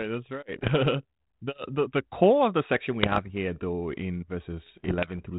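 Pops and rough, gritty bursts with brief jumps in level break in at 0.58 to 0.71 s, 3.03 to 3.31 s and 4.66 to 5.20 s. These are bit errors on an ADPCM link, at roughly one percent or less. Each flipped bit upsets the decoder's step size and predictor, so the damage rings on past the error itself. The band-limited sound fits a 32 kbit/s G.726 path.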